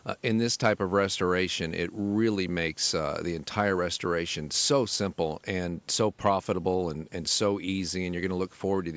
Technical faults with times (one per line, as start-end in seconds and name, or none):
none